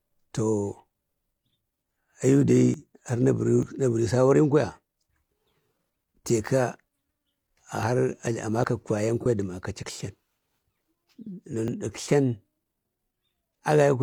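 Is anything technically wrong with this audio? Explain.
Yes, the speech has two kinds of fault: a series of short skips and one brief concealed dropout.

Dropped buffers (overrun) occur at 2.74, 3.63, 7.83, 8.64, 10.52 and 11.68 s. Each is heard as a small jump forward, as though a few tens of milliseconds of speech were cut out. There is no gap. This is likely a capture overrun, where audio was overwritten before it was read and the surrounding pieces were butted together. On a waveform each shows as an abrupt discontinuity. On a spectrogram it appears as a thin vertical broadband line.

An AAC frame loss with concealment runs from 9.20 to 9.26 s. The span is about 43 ms, which fits a single lost frame. The decoder rebuilt the missing stretch from the preceding spectrum, so the speech there sounds briefly smeared and noisy or phasey rather than silent. On a spectrogram the harmonic detail blurs into a short smudge of noise-like energy. 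The waveform keeps roughly the right envelope but loses its fine periodic structure.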